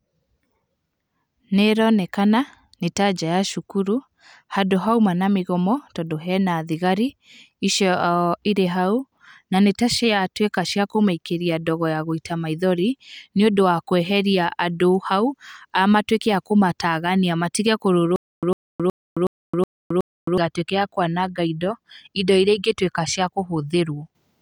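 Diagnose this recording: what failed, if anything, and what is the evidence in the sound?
A stutter with silent gaps at the playback or streaming stage, from 18.16 to 20.38 s: the same 103 ms burst of speech returns six times, each followed by 267 ms of digital silence, on a steady 369 ms cycle. A stalled buffer replaying its last fragment at each retry is the likely cause. The identical repeats and true silence set it apart from random dropouts.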